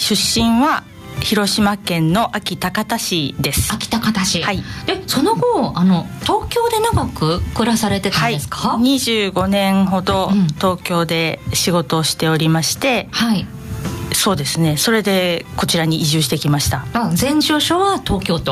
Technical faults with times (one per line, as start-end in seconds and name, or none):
0.00-18.52 gain pumping